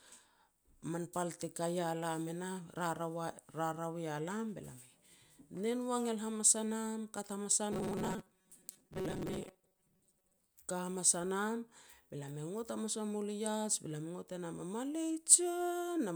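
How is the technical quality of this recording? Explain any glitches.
One glitch stands out. From 7.72 to 10.38 s, after "hamas a", the speech turns into a rigid, metallic 188 Hz buzz. This is robotic sound from repeated short buffers, likely with about half the audio replaced by looped 5 ms slices.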